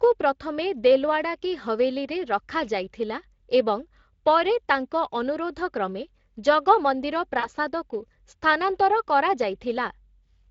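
A speech recording carrying Speex codec damage throughout, plainly audible, with a character that fits a Speex setting around 20 kbps. On a spectrogram, harmonics look smeared and grainy, and any content above 8 kHz appears as diffuse, shaped noise rather than clean structure. At 7.39 to 7.48 s there is VoIP packet loss concealed by the speech codec. About 40 ms of audio went missing, consistent with two lost frames, and the decoder filled the gap by extending the previous pitch and filter, producing a brief buzzy tone or coloured noise that fades. On a waveform, this shows as a repetitive, decaying stretch, and a spectrogram shows the stretched sound dimming until normal speech resumes.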